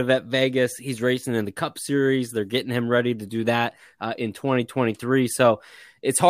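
Speech with no audible faults.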